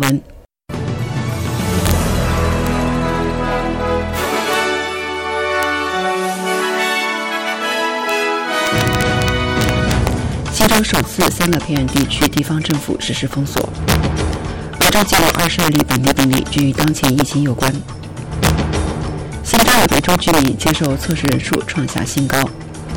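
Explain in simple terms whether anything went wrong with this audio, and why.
Integer overflow runs through the whole clip: the loudest peaks exceed the digital limit and wrap to the opposite extreme, producing sharp, violent cracks.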